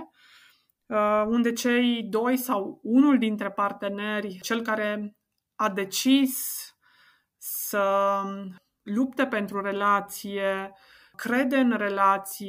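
Nothing in this speech recording stands out as a technical fault; it runs its whole length without any problem worth pointing to.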